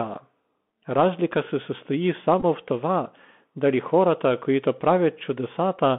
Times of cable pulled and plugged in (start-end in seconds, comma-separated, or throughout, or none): none